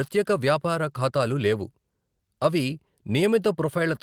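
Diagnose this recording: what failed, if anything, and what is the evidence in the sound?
Nothing failed here: listening through the speech, no stage of the chain leaves any mark that needs diagnosing.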